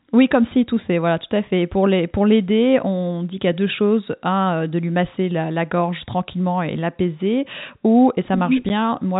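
At 8.69 s, just after "tranquillement et l'apaiser ou", packet loss filled with silence occurs: the receiver lost a 10 ms stretch, consistent with a single packet, and played silence instead. The speech, band-limited by the G.711 telephone coding, drops out briefly, with hard edges.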